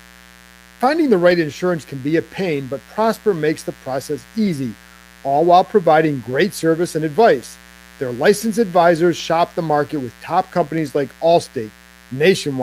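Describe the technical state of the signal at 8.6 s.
A 60 Hz mains buzz is present here and throughout. Switching spikes in the supply add harmonics well into the kHz range, giving a steady raspy buzz about 30 dB below the speech. This moment also falls within the span of clock drift buffer slips, from 1.31 to 12.35 s. Two independently clocked devices likely drift by around 100 ppm, so every 1.58 s a few samples are dropped or repeated, producing a regular click in the speech.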